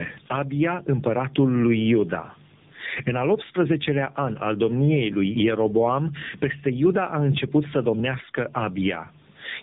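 Speech runs through two faults for its whole length. The gain is likely set far too high with a fast limiter pulling it back on every loud syllable, causing gain pumping: the level swings by around 15 dB, squashing loud and soft parts together. There is also tandem speech coding. The audio sounds decoded and re-encoded across links, which fits two AMR narrowband stages with a G.711 hop between them, each coder working on the previous one's damage. The result is rough, warbly and muffled, with nothing above 3.8 kHz.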